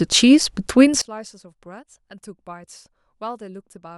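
From 1.02 s to the end, one channel inverted is the likely cause: one stereo side has its polarity flipped, so the shared centre content cancels on mono summing. The speech drops by about 26 dB, leaving a faint residue.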